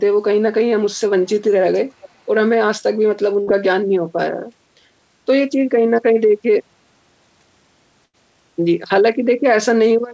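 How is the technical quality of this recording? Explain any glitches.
The recording has two kinds of glitch: faint echo leaks and two brief packet-loss dropouts. The audio is band-limited to 8 kHz by the call path.

At 1.24–1.40 s and 2.01–2.09 s, a very faint echo leak appears: a copy of the speech trailing 468 ms behind, likely from a loudspeaker's echo canceller missing some pickup. Unlike a dropout, nothing is lost.

At 3.42–3.49 s and 8.05–8.15 s, a burst of packet loss replaces about 60 ms and 80 ms of speech with a held, fading concealment sound, then resumes later, skipping audio rather than repeating it.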